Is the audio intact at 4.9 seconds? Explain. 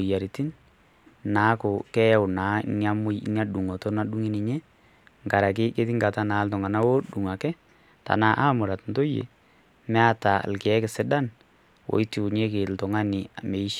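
Yes, the speech at 4.9 s plays through intact, with no audible fault at that moment.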